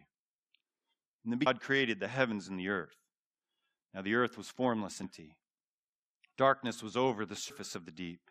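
Brief blips at 1.45, 5.03 and 7.49 s come from damaged data in the compressed stream, where the decoder misreads corrupted frames and loses sync.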